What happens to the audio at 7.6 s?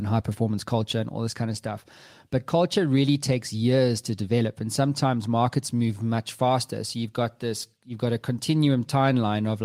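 Nothing goes wrong at 7.6 s; the speech carries on intact through that moment with no audible fault.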